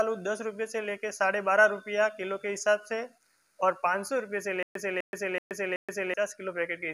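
The audio stutters with silent gaps from 4.63 to 6.14 s. A burst of about 251 ms repeats four times, each followed by about 126 ms of digital silence, so it recurs every 378 ms. The playback or stream likely stalled and replayed its last fragment, losing the audio in between.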